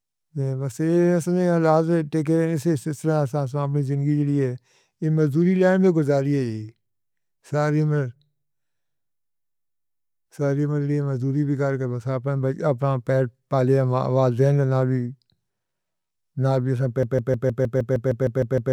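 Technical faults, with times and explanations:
17.03 to 18.72 s, broken-record loop: the playback chain, likely a player, encoder or stream that stalled, stopped taking in new audio and kept resending the last fragment it held. A slice of about 155 ms is heard again and again, back to back, repeating 11 times and running on to the end of the clip. Because each pass is an exact copy, the sound stutters mechanically at roughly six repeats per second, and the speech that belonged in those final 1.7 seconds never plays.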